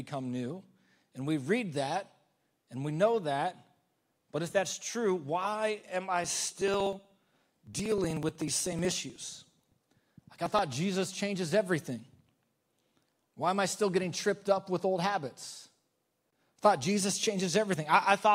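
From 6.24 to 10.59 s, periodic USB or driver dropouts skip about 2 ms of speech every 62 ms, causing regular ticks that show as evenly spaced vertical lines on a spectrogram.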